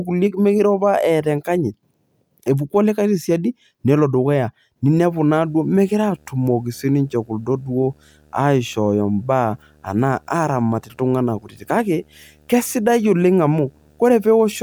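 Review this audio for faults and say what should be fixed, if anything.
Video or display buzz enters at 4.96 s and runs to the end of the speech. It is a steady buzz at 75 Hz with a layer of fine hash above it. It sits well below the voice, roughly 35 dB down. A screen or its video cable is coupling into the audio path, and 75 Hz matches that display's refresh rate. Prevent it by moving audio cables and interfaces away from monitors and video leads.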